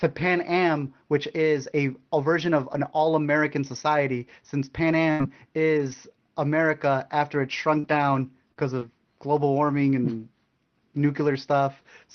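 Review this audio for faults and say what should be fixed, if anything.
A burst of packet loss runs from 5.11 to 5.22 s. About 80 ms of speech is missing, and roughly 81 ms of concealment covers the hole. The receiver stretched the last sound forward and faded it, giving a held buzz or a fading hiss before speech jumps ahead. On a waveform this looks like a decaying envelope with repetitive cycles. On a spectrogram the harmonics smear flat and fade, and the onset after the hole is abrupt. Prevention: a deeper jitter buffer or a more stable network route would reduce how often consecutive packets arrive too late.

Three lost packets were rebuilt from error correction, each 20 ms long, at 5.19 to 5.22 s (the tail of the burst), 5.77 to 5.80 s, and 5.92 to 5.93 s. Opus decoded the low-bitrate copy carried in the following packet, so there is no gap, but those moments sound briefly grainier and noisier. 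On a spectrogram, each shows as a short patch of blurred harmonics with a raised noise floor. The waveform barely changes. Prevention: raising the expected-loss setting so in-band FEC gets more bits would make the recovered frames cleaner.

Scattered short gaps occur between 7.10 and 8.83 s. There are about three separate losses, the longest around 40 ms, and together they conceal only about 4% of that stretch. Each is patched by extending the preceding sound, which is heard as a quick tick or hiccup. About 80 ms goes missing overall and about 100 ms is recovered from redundancy. On the waveform, look for tiny repeated periods or a step in the envelope. On the spectrogram, look for thin vertical seams. Prevention: fixing the source of intermittent late packets, such as Wi-Fi contention, would remove these.

The Opus call path itself caps content at 6 kHz, which fits a low bitrate of around 20 kbps.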